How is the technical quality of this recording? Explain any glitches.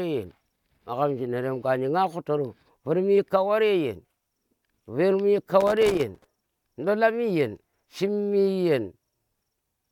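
The recording has one fault, a burst of loose connector crackle between 5.61 and 6.25 s. For about two thirds of a second, a worn or dirty contact in the signal chain keeps making and breaking as it shifts. That chops the speech into fragments, and any DC on the line turns each break into a pop. It is heard as an irregular, scratchy crackle. A waveform shows jagged dropouts and spikes, and a spectrogram shows scattered broadband vertical streaks across that span.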